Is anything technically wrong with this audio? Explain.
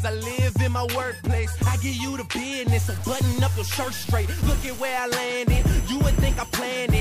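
Yes. From 2.68 to 4.99 s, low bit depth without dither: a grainy distortion sits about 20 dB below the signal and shifts with it, likely from truncation to roughly 5 bits.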